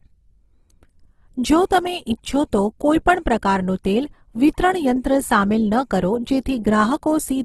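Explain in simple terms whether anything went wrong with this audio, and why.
The speech was likely squeezed hard by a low-bitrate codec and only afterwards saved as a large MP3. This fault is called low-bitrate audio saved at a high bitrate. The bigger file can't bring back lost detail, so from start to finish nothing sounds above 12.1 kHz.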